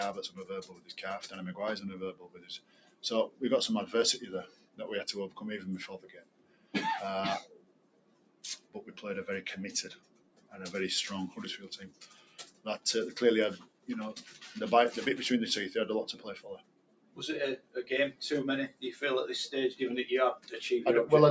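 A noise suppressor applied to music or sounds runs for the whole clip: a speech-tuned suppressor treats steady tones, ambience and tails as noise, so gain swings by roughly 15 dB and the sound pumps and thins between attacks.

Sound cut by the noise suppressor occurs at 0.29–0.93 s, 2.12–3.41 s, 4.47–8.93 s, 9.95–10.54 s, 11.84–12.66 s, 13.58–14.41 s and 16.12–18.83 s. Held and decaying parts sink by about 14–15 dB, cutting tails short. The call-style band limit, with nothing above 8 kHz, is normal.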